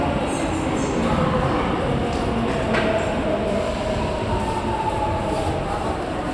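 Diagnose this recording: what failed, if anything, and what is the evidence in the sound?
Nothing failed: no stage in the chain, from wiring through playback, leaves any audible fault in this sound recording.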